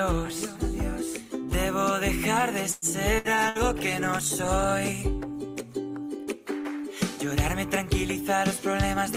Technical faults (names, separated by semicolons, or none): call audio freeze; burst of packet loss; call bitrate drop; jitter buffer speed-up